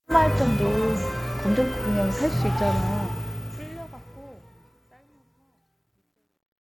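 From 2.72 s to the end, the fade-out shows truncation distortion on a fade. The gain stage drops low-order bits without dither, which fits roughly an 11-bit word length, so the falling waveform collapses into coarse square steps. From 4.19 s onward the tail turns gritty. Unlike broadband hiss, this grit follows the signal and disappears when it does.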